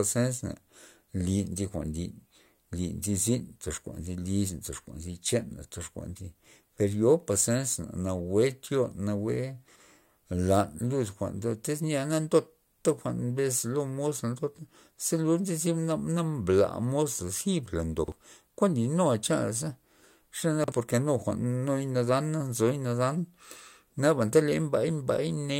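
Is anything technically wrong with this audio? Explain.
Yes. There are chunks out of order at 9.68–9.80 s, 18.04–18.12 s and 20.64–20.72 s. Each time, a 40 ms block of speech arrived late and played after the blocks meant to follow it. It was two blocks late at 9.68 s and one block late at the other two points. No audio is lost, but the shuffled order and the three hard joins it creates each time make a short, garbled stutter.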